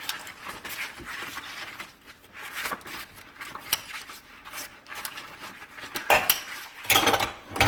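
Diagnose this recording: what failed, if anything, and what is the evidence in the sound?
The codec stage failed, through generation loss across the whole clip. The sound is swirly, smeared and hollow, with blurred attacks, more degraded than a single pass at a rate that fits Opus around 48 kbit/s would explain. The likely cause is repeated decoding and re-encoding, roughly seven times. Each pass quantises on a shifted frame grid, so noise accumulates. A spectrogram would show smeared transients; the waveform would show softened onsets.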